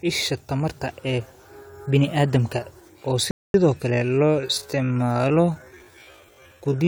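At 3.31 s the speech drops to silence for about 0.23 s, then picks up exactly where it left off, a rebuffering stall: playback exhausted its downloaded buffer and waited for more data to arrive. No material is skipped. The pause simply inserts roughly 232 ms of dead air, heard as an abrupt gap with a clean restart at 3.54 s.

From 3.88 s to the end the pace drops abruptly to about 0.59 times normal speed while pitch stays unchanged, which points to a time-stretched section. Most likely software lengthened the audio to fill a set duration, holding pitch by repeating short slices of the waveform. Those repeated slices make the slowed speech drag through to the close.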